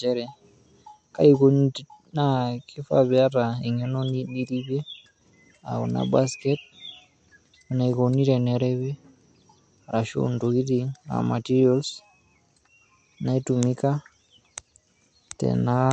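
Throughout, the speech is band-limited to 8.3 kHz with watery, swirling artefacts from likely MP3 compression; unlike a plain low-pass filter, sibilants chirp metallically, which fits a bitrate near 50 kbps.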